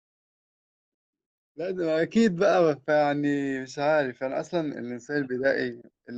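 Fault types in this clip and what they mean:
Nothing's wrong here, just a gentle rise in level from the very start up to about 2.15 s, the way an editor would ease it in.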